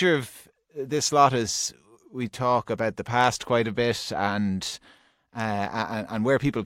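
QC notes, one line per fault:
No fault was heard anywhere in the speech. There is nothing to log against any time in the clip.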